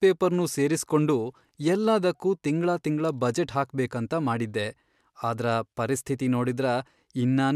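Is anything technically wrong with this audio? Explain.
No, the speech signal is technically sound, with nothing in it that points to a recording, processing or transmission problem.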